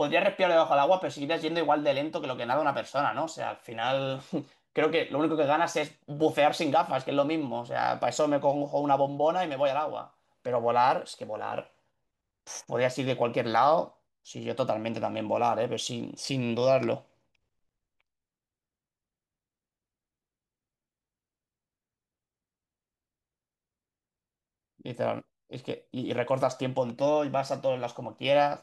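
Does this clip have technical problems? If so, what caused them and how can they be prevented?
No, the speech signal shows no technical faults that a listener can pick out anywhere in the recording.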